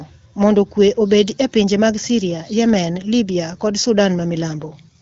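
No technical faults are audible anywhere in this speech.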